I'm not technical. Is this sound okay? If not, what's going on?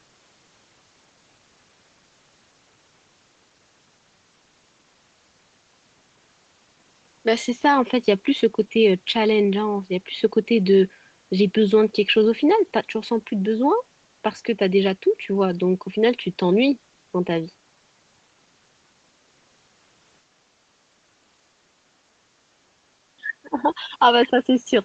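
No. From 23.16 to 23.92 s, near the end, the voice is turned down for most of that stretch, then returns. This is most likely speech suppressed in double talk: both people spoke at once, and the call's echo canceller could not tell the talker apart from the other side coming through the loudspeaker, so it turned the talker down along with the echo.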